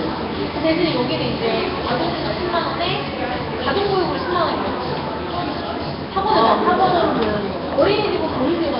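Throughout the clip the audio carries heavy Nellymoser compression damage, likely from the Nellymoser Asao codec at a bitrate near 22 kbps. Nothing is present above 5.3 kHz, and starved bands are replaced with noise, giving a rough, hissy halo and a smeared, underwater blur.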